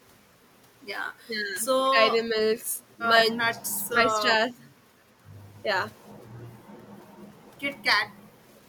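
At 1.15 to 1.27 s the room background dips by about 7 dB for roughly a tenth of a second. This is background gated by the echo canceller: it pulled the microphone down while the far end played, then released.

From 1.86 s the speech itself drops in pieces: 1.86 to 1.99 s by around 15 dB, 2.17 to 2.37 s and 4.01 to 4.29 s only slightly, and 3.32 to 3.82 s by around 35 dB, nearly gone. The likely cause is speech suppressed in double talk, with the canceller attenuating near-end speech it mistook for echo.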